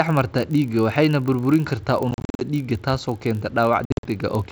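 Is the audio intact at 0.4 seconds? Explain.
No. At 0.4 s the speech carries a block size mismatch (padded), which runs through the whole clip. One stage hands on blocks slightly shorter than the next stage reads, and the shortfall is filled with zeros, so a tiny silent gap lands in every block. These gaps repeat at 46.9 Hz, which fits 1024-sample blocks read at 48 kHz, and produce a steady low buzz. Because the gaps are so short, the speech runs at 0.999 times its normal speed. Random dropouts would be irregular, but this buzz keeps an exact, fixed rate.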